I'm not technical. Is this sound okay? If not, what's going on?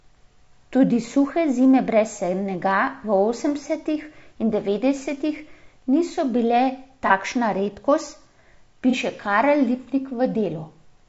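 No. Two things are wrong with this speech.

All the way through, the voice sounds rough and grainy, with a hiss sitting between the tones of the voice and a thin, artificial top end. That is most likely low-delay AAC compression, the kind used for video calls, squeezed too hard. It chops the sound into very short slices to keep the delay low, and squeezed this hard it has too little room to keep the voice smooth. Unlike a dropout, this roughness never comes and goes. It is steady for the whole clip.

Twice the sound briefly smears into a noisy, hollow little patch: from 7.07 to 7.12 s, just after "in devetdesetih niso bile", and again from 8.90 to 8.95 s. These are AAC frame loss with concealment. Each time, a single chunk of about 30 ms went missing, and the decoder filled the gap with a blurred guess built from the sound just before it. The roughness is constant, but these are short, isolated blips, too brief to fade into silence.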